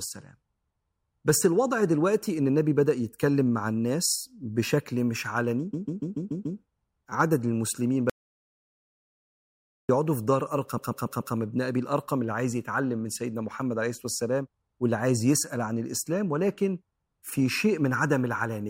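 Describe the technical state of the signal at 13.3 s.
At 13.3 s the signal is intact, with no audible technical fault at that point in the speech.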